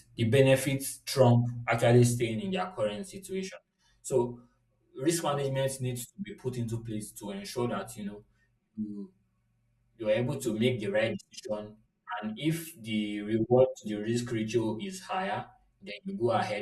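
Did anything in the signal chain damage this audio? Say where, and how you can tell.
Yes. Channel delay (comb filtering) sets in at 2.22 s, just after "the benefits trump actually", and lasts to 16.62 s. At the mono fold-down, one channel runs around 5 ms late, likely from a buffer offset, carving regular notches from about 100 Hz upward and leaving the speech hollow and phasey.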